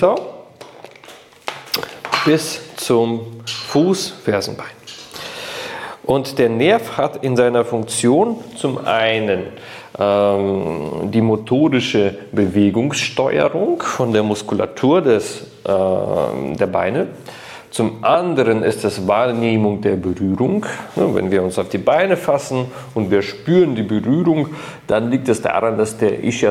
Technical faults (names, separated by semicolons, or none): mains buzz